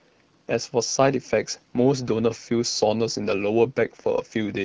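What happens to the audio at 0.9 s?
Nothing goes wrong at 0.9 s: the speech there carries on intact, with the AMR wideband (HD Voice) codec running at 12.65 kbit/s and leaving only light coding traces.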